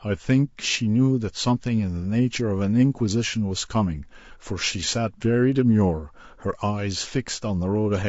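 From start to finish the speech has a rough, grainy texture, with noise filling the gaps between pitch harmonics and a top band that sounds thinned or synthetic. This points to low-delay AAC compression, likely AAC-ELD at a low bitrate near 32 kbps. At this bitrate too few bits are spread across its roughly 500 frequency lines per frame, so coarse quantization noise fills in between the harmonics. Unlike a narrowband telephone limit, high frequencies are still present, just artificial and grainy rather than cleanly cut away.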